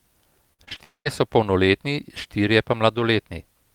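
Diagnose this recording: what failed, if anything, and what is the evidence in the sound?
The first failure is repeated packet loss, a robotic sound caused at the network stage. From 0.53 to 0.82 s the speech turns choppy. There are about five short holes. The longest lasts about 49 ms. Each hole is filled by stretching the last bit of sound, adding up to roughly 120 ms of patched audio. That is about 43% of the stretch. The holes come so close together that the patches join into a mechanical texture.

Right after, from 0.84 to 1.07 s, comes a long network dropout. The speech stops. In its place a continuation of the last sound buzzes on and fades, then gives way to silence for about 110 ms. The speech returns at 1.07 s, with around 220 ms of it simply gone. The likely cause is a run of audio that never reached the receiver, so the concealment stretched what it had and then gave up.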